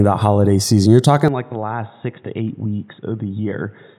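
At 1.28 s the speech abruptly turns dull and boxy and stays that way to the end, with no gap at the transition. Nothing is left above 3.8 kHz, the level drops by roughly 10 dB, and a faint new background noise appears, around 40 dB below the speech. The change is most likely an input switched to a poorer device, a narrower-band microphone or headset path with its own tone, gain and noise floor.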